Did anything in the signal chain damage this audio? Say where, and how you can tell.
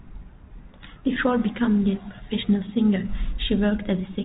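No, nothing stood out on listening; the speech simply carries the narrow band of the G.711 telephone coding it passed through.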